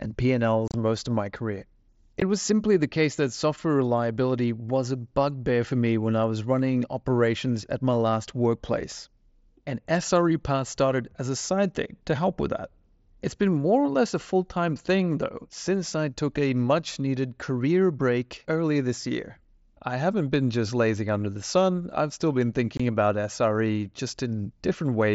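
At 0.68 to 0.74 s, 2.20 s and 22.77 to 22.80 s, unconcealed Bluetooth headset packet loss drops headset packets. Silence or an idle pattern fills each gap. The result is abrupt holes in the mSBC wideband speech.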